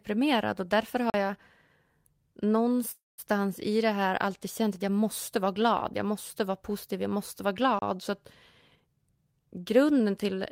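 At 1.10 s, right after "och därför", a block of digital silence cuts the speech out for 40 ms. Unlike a freeze, nothing is held over the gap.

From 2.91 to 3.20 s, just before "i det här alltid", a call audio freeze stretches the last sound into a fading buzz that falls silent for about 180 ms. The speech then resumes without losing anything. This was likely caused by the jitter buffer running empty while packets were held up.

At 7.79 s, after "positiv jag måste vara", a second block of digital silence drops out 30 ms.

From 8.75 to 10.39 s, a jitter buffer speed-up trims repeated pitch-period slices, roughly a third of a second in total, so the speech runs at 115% pace. The pitch stays put, unlike a plain playback-speed change.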